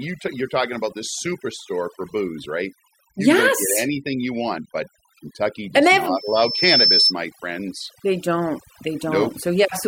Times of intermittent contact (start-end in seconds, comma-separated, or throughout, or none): none